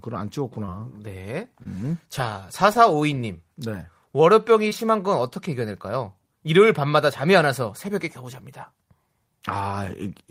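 Short concealed packet loss breaks up this speech clip four times, at 0.65 to 0.69 s, 1.63 to 1.67 s, 2.73 to 2.77 s and 4.69 to 4.73 s. Each time about 20 ms of audio arrived too late to decode, and the receiver covered the gap by extending the preceding sound, pitched or noise-like, for 16 to 20 ms before crossfading back into real audio. Each gap comes through as a brief smear or wobble, where a quick consonant can drop out.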